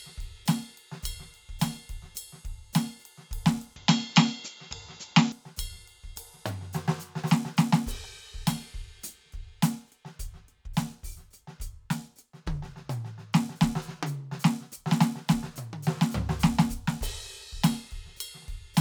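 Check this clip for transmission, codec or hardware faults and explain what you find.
One fault is present. From 3.76 to 5.32 s the music turns dull, with nothing above 7.6 kHz, a level shift of roughly 5 dB and a faint new noise floor. The change happens without a gap, likely an input switched to a poorer, narrower-band device.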